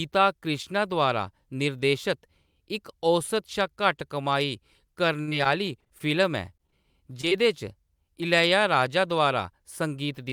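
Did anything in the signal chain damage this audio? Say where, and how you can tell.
Yes, the damage happened in the network stage. From 5.21 to 6.02 s there is repeated packet loss with a robotic sound. Eight gaps, the longest 60 ms, were patched by stretching the last sound, so about 22% of that stretch is synthetic. The gaps arrive in a dense run, which makes the audio choppy and robotic rather than briefly smeared.

Short concealed packet loss follows at 6.58–6.61, 6.70–6.74, 7.21–7.25 and 7.29–7.33 s. Each drops about 20 ms, and the decoder fills the hole from the preceding sound before blending back. These are isolated smears or wobbles, too brief and sparse to sound robotic like the earlier run.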